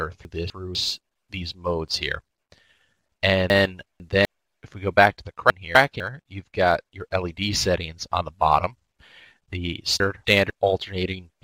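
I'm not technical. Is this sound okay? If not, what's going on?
No. At 0.25–0.75 s, 3.5–4.25 s, 5.5–6.0 s and 10.0–10.5 s, the sound jumbles briefly. These are chunks out of order: quarter-second pieces arriving late and playing after what should follow them.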